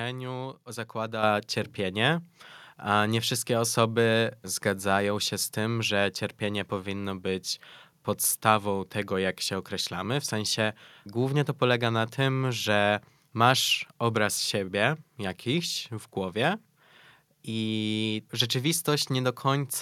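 A microphone volume stepped up fault hits this speech clip at 1.23 s, just before "cierpienie a nie wszystkie". The call software judged the input too quiet and raised the microphone's gain in a single step of about 7 dB, so voice and background noise jump louder together.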